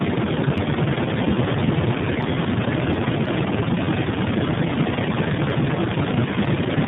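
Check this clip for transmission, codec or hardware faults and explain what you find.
There's one fault, and it runs through the whole clip: tandem speech coding. The speech sounds like it passed through about three low-rate speech codecs in a row, probably a GSM-style coder, then something like G.729A, and finally iLBC, with plain telephone-grade links between them. Every hop decodes and re-encodes, so each coder works on the previous one's errors. That's why the voice comes out rough, muffled and warbly, with nothing above 3.8 kHz.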